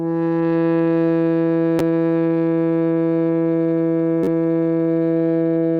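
Twice in this music clip the playback device ran dry of fresh audio and played its last buffer again, a repeated buffer fault. Each repeat lasts about 10.7 ms, which fits a 512-sample buffer. At 1.79 s one piece plays twice, heard as a click. From 4.24 to 4.27 s it plays four times, a brief buzzing stutter with a hard join at each repeat, and roughly 30 ms of music goes missing.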